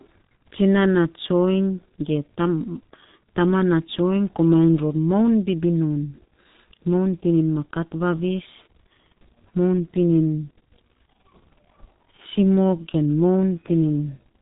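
Throughout, G.723.1 codec damage is heavy: nothing above 4 kHz, blurred consonants, hoarse muffling. The spectrogram shows a hard ceiling and smeared 30 ms frames, fitting roughly 6 kbit/s.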